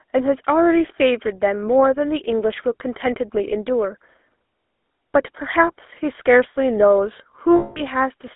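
GSM full-rate codec runs throughout: the speech is modelled and rebuilt from sparse pulses, giving plainly audible buzzy roughness, a band of 250 Hz to 3.6 kHz, and a sound that fits 13 kbps. Lost GSM frames from 7.56 to 7.84 s: the last good frame is repeated, holding the sound as a metallic ring that fits about ten missing frames.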